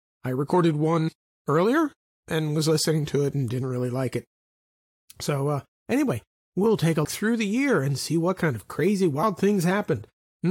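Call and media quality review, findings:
Two short glitches, 1.07–1.09 s and again at 9.22 s. Damaged data in a compressed stream: corrupt bytes in the encoded frames there, so the decoder misreads them, loses sync and hunts for the next good frame header. Check the transport or storage path.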